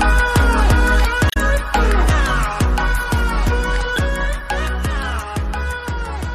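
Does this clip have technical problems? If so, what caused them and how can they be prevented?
Yes: damaged data in a compressed stream, at 1.27 to 1.37 s and again at 3.96 to 3.98 s. Corrupted bytes in the encoded stream make the decoder misread those frames and lose sync until it finds the next valid frame header, so a short chirp, squawk, click or hole replaces the sound. The first event also shifts the timeline by adding about 6 ms. Prevention: check files and streams with checksums or error-protected transport, and keep metadata such as stream titles out of the audio frames.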